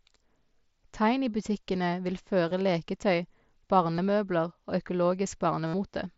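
Speech carried over a Bluetooth headset link, with concealed Bluetooth headset packet loss in three places: 2.49 to 2.51 s, 3.95 to 3.98 s, and 5.67 to 5.74 s. Headset packets went missing, and the phone filled each gap by repeating the closest-matching piece of the preceding audio. The first two gaps are brief, about 22 ms and 30 ms. The last, about 70 ms, holds a buzzy steady tone before a slight warble as speech returns. The wideband mSBC codec is audible as a speech band capped near 8 kHz.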